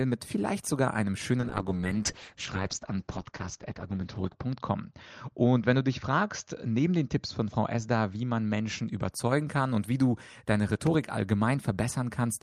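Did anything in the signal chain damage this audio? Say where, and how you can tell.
Yes. A call bitrate drop runs from 1.41 to 9.17 s, starting after "mit vielleicht sogar einem" and clearing by "kann und wie du". The speech turns coarse and muffled, with the top end cut from 20 kHz to 8 kHz and the worst stretch lasting 2.94 s. This fits the call's bandwidth estimate falling and the encoder being throttled from about 32 to 8 kbps.

A loud pop occurs between 10.87 and 10.96 s, just after "und wie du deine". It is a pair of sharp clicks about 10 dB above the speech, which carries on underneath. This is likely an electrical transient in the analogue wiring, such as a plug or switch contact, added to the signal.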